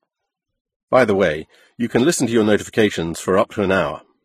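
Throughout the speech, nothing sounds above 14.9 kHz, and two kinds of coding damage are heard together: the artefacts of a low-rate HE-AAC stream, with MP3's own artefacts over them. That layering separates it from one codec. The likely cause is transcoding between lossy codecs, a very low-rate HE-AAC stream later re-encoded as MP3.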